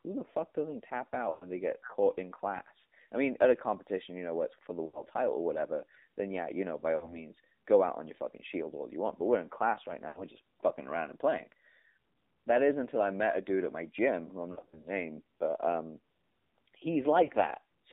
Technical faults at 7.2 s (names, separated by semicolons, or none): AMR narrowband mobile codec; lost AMR speech frames